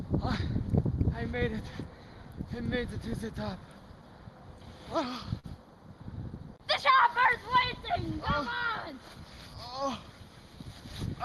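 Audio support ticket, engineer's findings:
Short stall from a late packet at 5.39 to 5.46 s. Sound held and stretched about 43 ms, slight buzz or dip on the hold, then picks up exactly where it left off with nothing dropped. Jitter buffer ran dry waiting on a late packet. Playout sits about 43 ms later afterwards. Top end stops around 12 kHz, consistent with Opus at a modest call bitrate.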